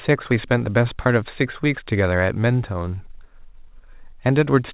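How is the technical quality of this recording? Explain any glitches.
The recording is narrowband speech with nothing above 4 kHz, consistent with a G.711-style call codec. Its main technical problem is timing: short hiccups recur across the clip.

Clock drift between sender and receiver runs through the whole clip. The sending device's clock appears to run about 4 percent fast, so audio reaches the receiver's jitter buffer faster than it is played out. The buffer keeps overfilling, and the receiver has to discard small pieces to keep up. Unlike packet loss, nothing goes silent or smeared. The result is a persistent, one-directional rhythm problem rather than isolated gaps.

Repeated timing corrections occur from 0.12 s to 4.51 s. These are the receiver's trims in response to the drift, and they bring the effective playback rate to 104 percent. Each cut removes only a sliver of audio, at uneven intervals, so the speech sounds faintly rushed and unsteady, with slight skips. 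They differ from a clean resampling speed-up, which would shift pitch smoothly. Here pitch stays put and only the timing stumbles.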